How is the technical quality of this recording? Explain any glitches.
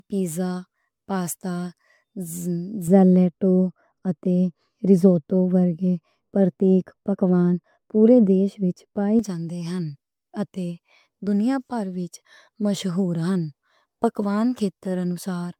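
Technical quality is poor, with two faults.

Generation loss runs throughout. The speech sounds swirly, smeared and hollow. It is likely from repeated MP3 re-encoding, around seven passes, consistent with 128 kbit/s.

De-emphasis applied wrongly affects 2.88 to 9.19 s. A misplaced treble cut tilts highs down, about 11 dB at 10 kHz. The speech turns dull and muffled.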